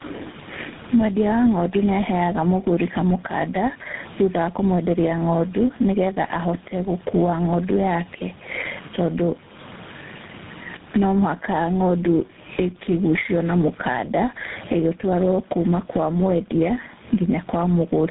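Gain pumping runs through the whole clip, a swing of around 20 dB. Likely cause: gain set far too high, with a fast limiter clamping down on each peak, which squashes loud and soft together.

Tandem speech coding is also present throughout. The speech is rough, muffled and warbly, with nothing above 3.8 kHz. This points to about three speech codecs in a row, ending in something like GSM full rate, each recoding the previous one's degraded output. The room noise sits about 42 dB below the speech.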